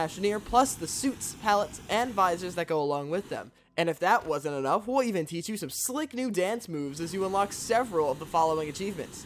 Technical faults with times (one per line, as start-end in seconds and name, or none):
none